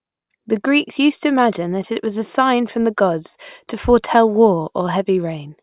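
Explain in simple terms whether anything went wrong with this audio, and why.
Nothing went wrong here; the speech sounds as it should.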